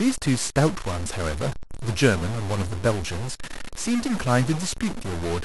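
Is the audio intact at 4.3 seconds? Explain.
No. At 4.3 seconds the speech carries the same distortion heard throughout the clip, and the gaps between phrases fill with a rough noise floor. That points to a stuck bit, likely from a faulty line or converter, where one bit stays pinned and pushes about half the samples off by a fixed step. Unlike clipping, which appears only on loud peaks, this fault also hits quiet passages and silences.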